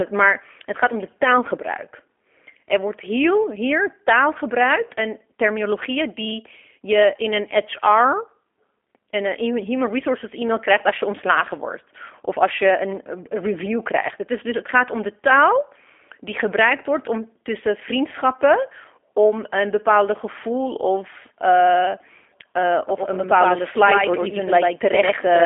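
From the start, the speech passes through a G.729 codec. The sound points to the 8 kbit/s G.729A variant, which rebuilds each 10 ms frame from a vocal tract filter, a pitch predictor and a few pulses. The damage is plainly audible: speech stays intelligible but sounds rough and slightly synthetic, and it is confined to a telephone band of about 300 Hz to 3.4 kHz. A spectrogram shows nothing above 3.5 kHz and a thin, smeared look to the harmonics.

At 22.89 s a doubled audio track begins and lasts to the end of the clip. A second full-band copy of the same speech joins roughly a tenth of a second behind and roughly 5 dB quieter. This is likely a second capture path or an edit holding two copies out of step. The copy cuts in abruptly with no decay or room colour, so it sounds like a hard slapback double rather than reverberation. On the waveform, every onset repeats once at that fixed lag. 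On a spectrogram, each syllable gains a fainter twin shifted just to its right.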